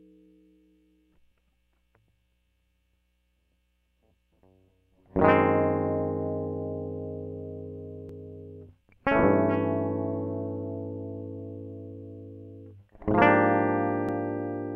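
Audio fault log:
8.09 s and 14.09 s, overlap between stream segments: two tiny skips about 6 s apart in the music, where adjoining segments' time stamps overlapped and the player trimmed sound that was never duplicated. About 13 ms and 5 ms disappear, so the waveform jumps abruptly.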